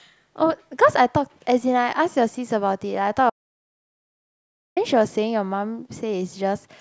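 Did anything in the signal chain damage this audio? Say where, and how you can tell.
Yes. At 3.30 s the speech cuts out mid-flow and comes back at 4.77 s, so about 1.47 s is gone. That gap is an audio dropout to silence: dead silence with no room tone or noise floor underneath, which tells you the recorder kept writing while nothing reached it. The likely culprit is the input side, a device or link dropping out or a stray mute, rather than anything acoustic in the room.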